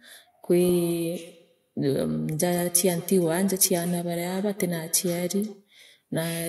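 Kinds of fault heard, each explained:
Feedback echo between two devices: a second device replays the speech into the microphone, returning it about every 150 ms, about 15 dB down, as faint spaced copies trailing each burst.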